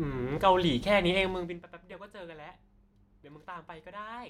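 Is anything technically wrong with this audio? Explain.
No, nothing technically wrong.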